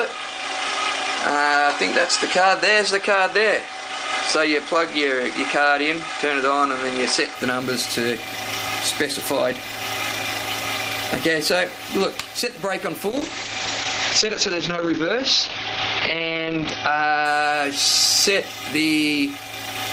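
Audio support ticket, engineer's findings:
0.0–7.35 s: dull, band-limited sound, nothing above 9.5 kHz, faint added noise floor about 45 dB down, no level step or gap at 7.35 s. Likely input switched to a poorer device, narrower capture band, then restored.

13.1–17.31 s: call bitrate drop. Audio turns rough and muffled, top end falling from 20 kHz to 6 kHz. Worst for about 3.7 s. Pattern fits Opus moving from roughly 32 to 8 kbps after a bandwidth-estimate fall, then recovering.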